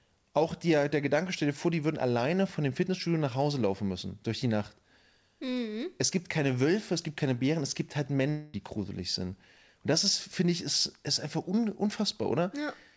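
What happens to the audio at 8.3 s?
Likely a long network dropout: packets stopped arriving from 8.30 to 8.56 s, so the receiver filled the gap by extending the last sound as a fading buzz, and the lost speech never returns.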